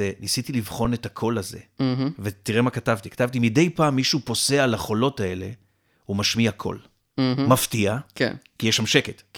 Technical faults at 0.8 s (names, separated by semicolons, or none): underrun with held sample